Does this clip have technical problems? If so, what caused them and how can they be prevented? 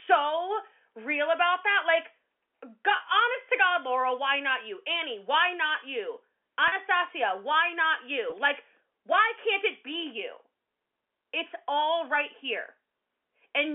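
Yes. Brief buzzy holds at 2.96–3.00 s, 6.68–6.72 s just after "why not you", and 8.30–8.32 s are packet loss with pitch repetition. The receiver looped the last pitch period over 40, 40 and 20 ms gaps, which fits one or two lost 20 ms packets each. Reducing network loss, or adding forward error correction with an adequate jitter buffer, would prevent these dropouts.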